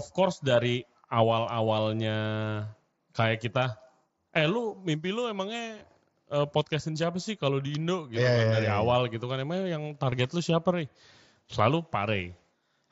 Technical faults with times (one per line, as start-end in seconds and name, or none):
5.79 concealed Bluetooth headset packet loss
10.11 concealed Bluetooth headset packet loss